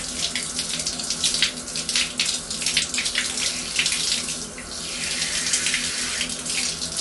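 A starved MP3 encoder, likely near 48 kbps, cuts everything above 11.3 kHz throughout, leaving the sound dull, watery and swirly, with smeared attacks.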